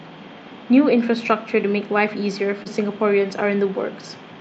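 Short concealed packet loss occurs at 2.63 to 2.67 s in this speech clip, heard as a brief smear where the sound momentarily wobbles instead of continuing cleanly. About 20 ms of audio failed to arrive in time, and the receiver covered the gap by extending the preceding sound for about 18 ms before blending back into the real signal. The audio passed through a call codec whose upper band stops near 8 kHz.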